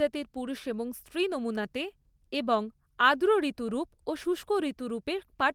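No faults in this speech; the Opus voice compression behind it sounds consistent with fullband hybrid coding at around 24 kbps and is working as intended.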